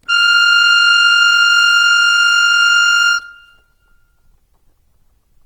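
A music clip with plainly audible Opus compression throughout. Tones turn noisy, rough and grainy. Nothing sounds above 19.7 kHz. Likely a CELT encode near 16 kbps.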